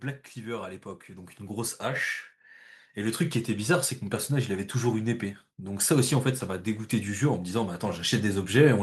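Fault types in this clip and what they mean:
Automatic gain rising: the gain control slowly turned up an input it judged too quiet, so from 2.94 to 3.94 s speech and background swell together by about 4 dB. The one-second ramp also lifts the noise floor, unlike louder talking or a sudden level step.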